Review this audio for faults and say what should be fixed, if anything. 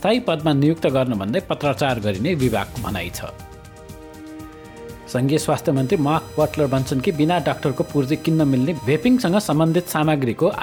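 A chirping, buzzing whine with pulses repeating around 1 kHz sits roughly 25 dB under the main sound from 5.77 to 9.98 s. This is computer activity noise: processor, graphics or mouse load changes disturb the ground shared with the audio circuit. Prevent it with an external USB audio interface and a ground-loop isolator.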